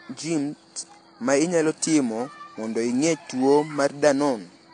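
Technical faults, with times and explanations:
Throughout, transcoding between lossy codecs: nothing above 10.2 kHz, and the speech has smeared, warbling artefacts with a second layer of coding grit. This fits a likely low-bitrate AAC encode re-encoded to WMA, which added its own artefacts without restoring lost detail.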